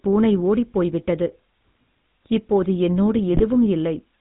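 From start to finish the speech has that GSM full-rate codec grit: everything above 4 kHz is gone, and the thinned-out pulse excitation gives voices a buzzy, gravelly edge. The damage is plainly audible and fits the old 13 kbps full-rate coder.

Then, from about 3.29 to 3.43 s, right after "இப்போது என்னோடு", GSM bit errors kick in. Corrupted filter, pitch and gain values throw seven frames off one after another, so the voice squawks and gargles there, which points to a badly degraded radio link.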